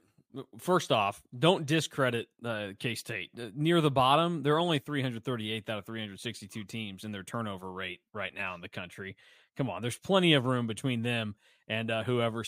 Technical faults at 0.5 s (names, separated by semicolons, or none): none